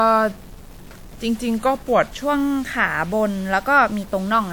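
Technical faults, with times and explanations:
Throughout, stuck bit: distortion rides on the speech and a hiss fills the pauses, likely a single converter bit held fixed; unlike clipping, it persists at quiet levels.
0.00–2.22 s, section at the wrong speed: the speech plays at 0.893 times speed, about two semitones low, likely from a clock mismatch; pitch and tempo drop together, unlike a pitch shift.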